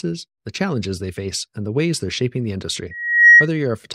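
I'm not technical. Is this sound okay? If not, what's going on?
No. From about 2.91 to 3.48 seconds there is loudspeaker feedback squeal: a microphone is picking up the loudspeaker it feeds, so the sound loops round and round and one pitch keeps growing. Here that pitch is a high whistle near 1.9 kHz, swelling over a bit under half a second until it is much louder than the speech. Unlike a steady beep or hum, it starts faint and builds by itself.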